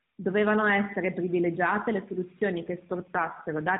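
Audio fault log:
2.56–3.80 s, AMR rate drop: right after "essere privilegiate le", the speech turns rougher and more synthetic and stays that way to the end of the clip. The narrowband band holds at its 4 kHz ceiling and there is no gap. The network has pushed the AMR codec to a lower mode and spent the freed bits on error protection. The coarser excitation pulses and vocal-tract model fit a step from the 12.2 kbps mode down to about 5.9 kbps.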